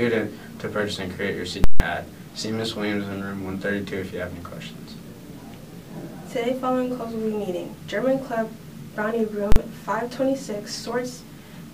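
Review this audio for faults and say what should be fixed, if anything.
A calculation produced invalid, infinite numbers that were clamped to full scale, giving invalid numbers at full scale. From 1.64 to 1.80 s the output is pinned at one extreme value for 160 ms, heard as a loud pop at each edge with nothing between, and the 40 ms block at 9.52 to 9.56 s lands as one bang. To prevent it, check processing output for non-finite values and replace them with silence, or reset the offending stage, before they reach the converter.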